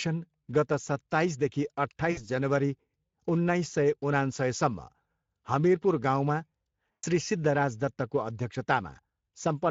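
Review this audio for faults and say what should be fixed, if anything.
Speex codec damage runs through the whole speech clip: hoarse, noisy excitation and a thin, noise-filled top band, which fits a mid-quality Speex setting near 17 kbps. Encode at a higher quality setting, or use a modern codec such as Opus.

VoIP packet loss concealed by the speech codec occurs at 2.11–2.23 s, just before "जनवरी उन्नाइस सय", and at 6.91–7.04 s. The decoder stretches the last pitch and filter into a fading buzzy tone or coloured noise for about 60 ms and 120 ms, consistent with three and six lost 20 ms frames, and the following speech stays weak briefly. Add jitter buffering, forward error correction or redundancy on the network path.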